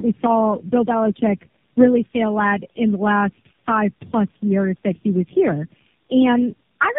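Throughout, the speech shows tandem speech coding: it was decoded and re-encoded across several low-rate speech codecs in a row, which fits a chain like AMR-NB, GSM full rate and AMR-NB again. Each stage compounds the last's damage, leaving rough, muffled, warbly speech with nothing above 3.5 kHz.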